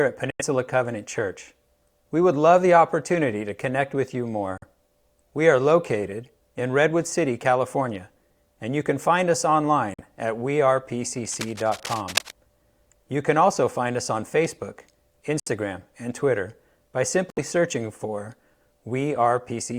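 At 0.30 s, 4.58 s after "to connect with you", and 9.94 s after "you can find us", the speech drops abruptly into silence. These are corrupt frame muted faults. Damaged compressed frames were rejected, and silence replaced them. The gaps last from about 0.07 to 0.11 s. From 11.18 to 12.31 s, cable scratch noise adds uneven scratching at about 10 dB below the speech. It likely comes from a worn cable or connector being moved. More muted frames cut in at 15.40 s and 17.30 s, just before "searching for".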